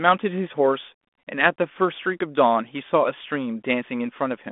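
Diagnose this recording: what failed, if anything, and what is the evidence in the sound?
Nothing failed; no fault is audible anywhere.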